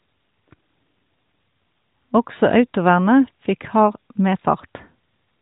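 Speech, with no technical faults to report.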